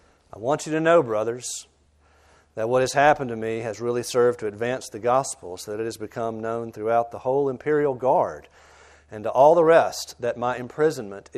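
Throughout, the sound is dull and gurgling, with upper sub-bands flickering on and off as ragged gaps on a spectrogram, likely MP2 compression at a bitrate near 80 kbps.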